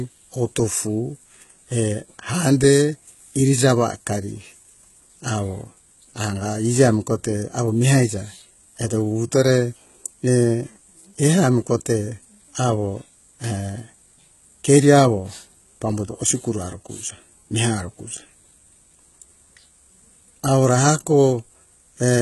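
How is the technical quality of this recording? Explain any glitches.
The recording is held back by heavy compression damage running the whole way through.

HE-AAC compression, throughout: nothing survives above 11.8 kHz, and the treble below that is likely synthesised by band replication from lower frequencies rather than coded directly. The misaligned copied harmonics make s sounds gritty and metallic, which fits a very low bitrate of around 16 kbps.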